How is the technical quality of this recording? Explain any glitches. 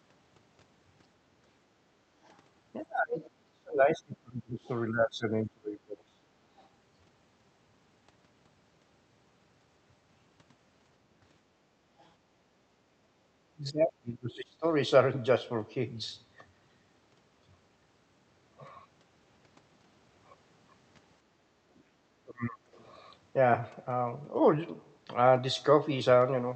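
The recording has clear echo-control problems. The speech comes through a call path band-limited to about 8 kHz, which fits a wideband Opus setting.

Other side's voice leaking through: Brief traces of a second voice appear at 2.24–2.33 s, 6.57–6.67 s and 12.02–12.08 s. They are very faint, roughly 35 to 40 dB below the speech. The likely cause is loudspeaker echo that the canceller failed to remove fully.

Speech suppressed in double talk: The talker's voice dips sharply at 2.81–6.19 s, 13.51–14.66 s and 21.86–22.67 s. At its deepest it drops by as much as about 30 dB. This is likely the canceller turning everything down while both sides talked at once.

Background gated by the echo canceller: The room sound ducks by about 7 dB at 13.15–13.23 s and again at 21.23–21.57 s. The canceller clamped the microphone while the loudspeaker played. The background returns once it releases.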